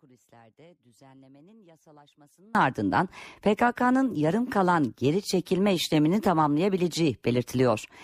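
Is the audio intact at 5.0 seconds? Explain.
Yes, the speech at 5.0 seconds is intact, with no dropout, click or other fault.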